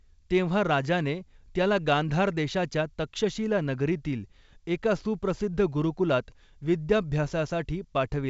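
No faults are audible in the speech, which carries G.722 wideband telephone coding with the band ending near 7.7 kHz and at most a faint trace of codec hiss.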